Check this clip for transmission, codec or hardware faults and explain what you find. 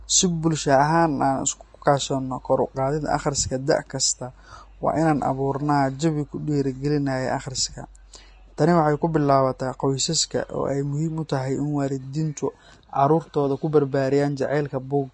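One codec fault runs through the whole speech recording. From start to finish the treble sounds hissy and grainy, consonant attacks are smeared, and nothing reaches above 10.6 kHz. These are the marks of Vorbis compression, likely at a low setting around 32 kbps. At that quality the encoder lowers its cut-off and quantises the upper residue above its smooth spectral floor so coarsely that fine detail is replaced by noise of similar energy, producing the plainly audible roughness.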